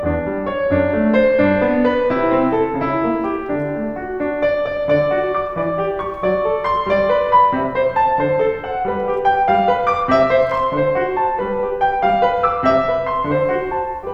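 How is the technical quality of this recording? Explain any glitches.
No audible glitches or faults.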